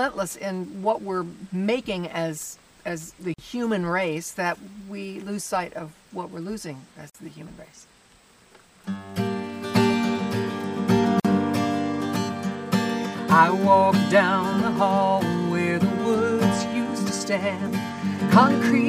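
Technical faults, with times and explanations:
3.34–3.38 s, 7.10–7.15 s, 11.20–11.25 s: gap at a join of encoded pieces. Silences of about 45–48 ms come from leftover encoder delay and padding at each join, showing as blank vertical strips with slightly smeared edges.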